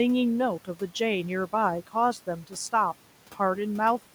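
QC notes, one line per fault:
2.43–2.56 s, speech cut by the noise suppressor: the suppressor mistook speech for noise and pulled it down about 10 dB, so it sounds swallowed; the waveform shows a brief notch and the spectrogram a faint band.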